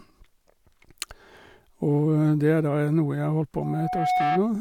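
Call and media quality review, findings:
Loudspeaker feedback squeal, 3.56–4.46 s: single 735 Hz tone swells over about half a second to roughly speech level. Mic picking up its own speaker, loop gain above one.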